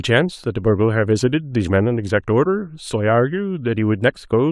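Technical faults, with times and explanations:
Nothing stood out as a technical fault on listening to this speech recording.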